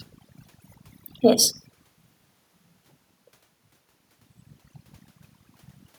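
Overdone noise removal runs through the whole speech clip. A noise reduction stage set far too aggressively is treating any frequency band that sits near its noise estimate as noise and pulling it down hard or switching it off. The room's background drops and breaks up into twinkling, chirpy specks, and the quieter parts of the voice are stripped away with it. The level changes around 1.5 and 3.5 seconds are just the talker shifting position.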